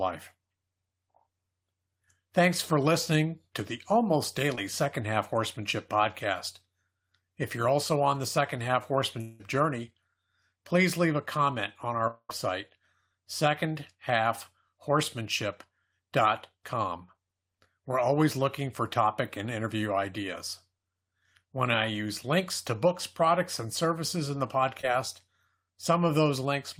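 At 4.55 s, after "listening to the almost", a short concealed packet loss leaves a brief smear. About 20 ms never arrived, and the receiver filled it in. At 9.21 s, and at 12.07 s after "leave a comment on", the audio becomes a fading buzz or hiss for about 0.2 s. The second gap ends in a short silence before the audio returns. A long network dropout is the likely cause. At 24.81 s, after "and services in the", another short concealed packet loss briefly smears the sound.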